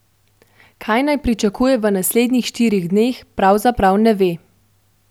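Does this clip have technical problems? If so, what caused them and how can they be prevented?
No, there's nothing technically wrong to hear in this speech clip, so there's no cause to trace and nothing that needs preventing.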